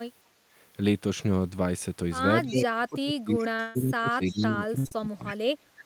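Speech clip with a few call-path problems stacked up from about 2.5 s on. There's echo leak at 2.47 to 2.65 s, 4.27 to 4.46 s and 5.27 to 5.36 s: a faint copy of the sound trailing by 313 ms at about 15 dB down, likely a loudspeaker on the far end whose echo canceller let some of the mic pickup through and back to us. Overlapping that, from 2.49 to 5.38 s, you get speech suppressed in double talk. The talker keeps ducking, dropping by something like 30 dB at worst over roughly three seconds, which is likely the canceller failing to tell the local voice from the echo while both sides talk and pulling both down. There's short concealed packet loss at 3.55 to 3.61 s and again at 4.87 to 4.93 s, each about 40 ms missing and patched by extending the previous sound. You hear it as a quick smear or wobble, and a brief consonant can slip away. Right next to those are bursts of packet loss. From 3.61 to 3.77 s about 140 ms went missing, and from 4.79 to 4.87 s about 60 ms. 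The decoder held the last sound and faded it, giving a buzzy or hissy tail before the audio picks up further along with that stretch gone.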